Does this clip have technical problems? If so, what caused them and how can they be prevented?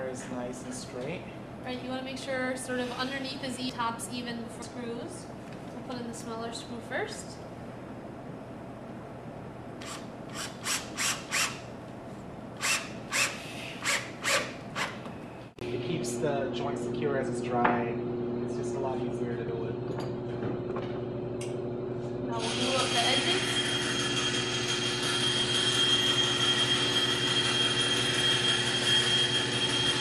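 Yes. Compressed frames are skipped at 3.69 s, 4.62 s and 19.48 s. The audio jumps ahead by roughly 0.4 s, 0.7 s and 0.1 s, which fits whole frames of about 93 ms going missing. Verified, complete file transfers prevent this.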